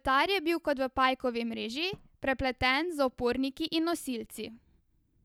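No audible technical fault is present in the speech at any point in the recording.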